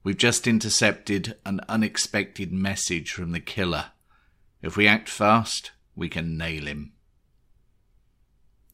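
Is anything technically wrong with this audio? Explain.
No, nothing stood out as technically wrong on listening to this speech recording.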